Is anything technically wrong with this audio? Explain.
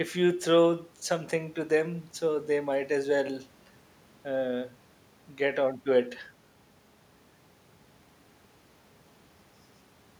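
No, nothing technically wrong stood out on listening to this speech recording.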